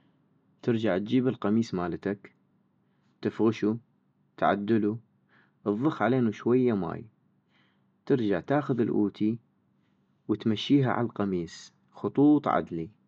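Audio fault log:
Nothing to log here: no faults turn up anywhere in this bit of speech.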